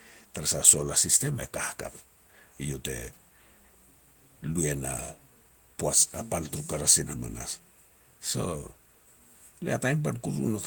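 Speech runs throughout with no audible technical fault anywhere in the signal.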